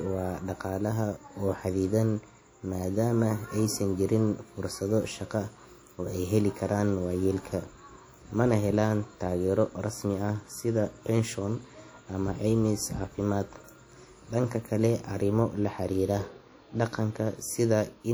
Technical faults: WMA compression

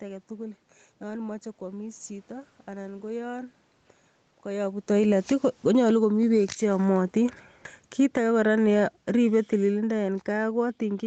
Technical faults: automatic gain falling

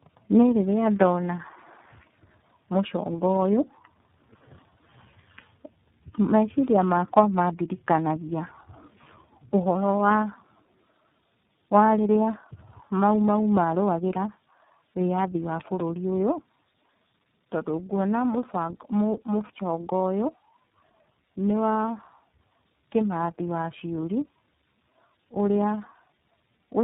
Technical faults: tandem speech coding

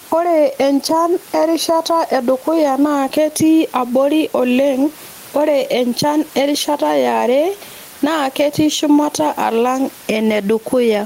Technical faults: gain pumping

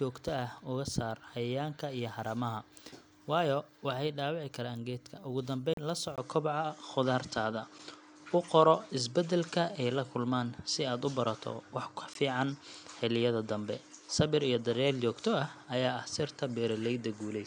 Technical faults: Bluetooth stall; input switched to a poorer device

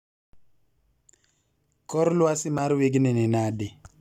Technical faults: gap between stream segments

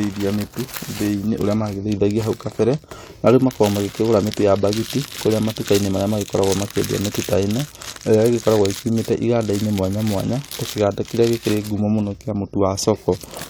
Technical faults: none

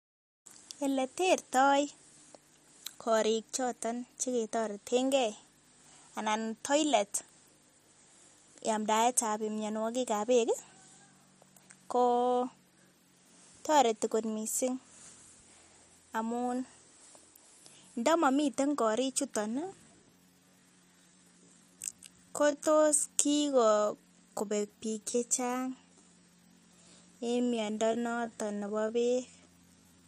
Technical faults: time-stretched section

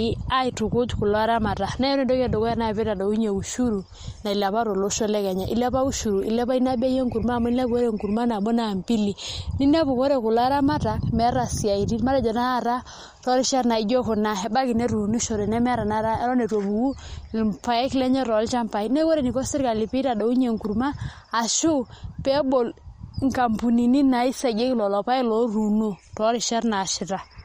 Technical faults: MP3 compression

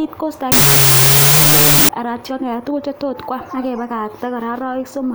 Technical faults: wrong sample width

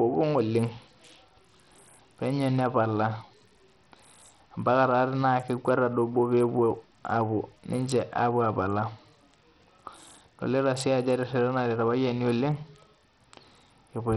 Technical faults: Bluetooth SBC compression

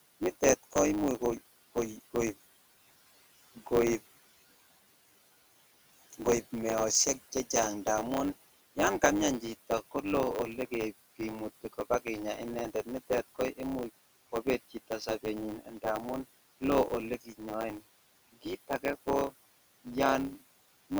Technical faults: block size mismatch (truncated); speech cut by the noise suppressor

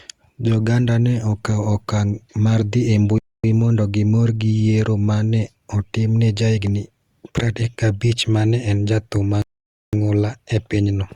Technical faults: rebuffering stall

